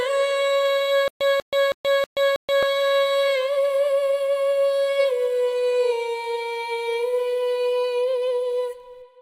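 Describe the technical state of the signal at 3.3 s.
The signal at 3.3 s is intact, with no fault audible at that moment.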